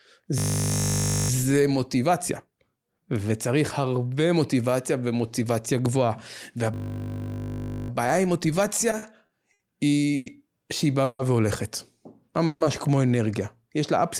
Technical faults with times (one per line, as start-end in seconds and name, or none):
0.38-1.30 system hang loop
6.74-7.90 system hang loop
8.81-9.61 repeated stalls (stutter)
10.16-10.28 call audio freeze
11.04-11.21 call audio freeze
12.46-12.62 call audio freeze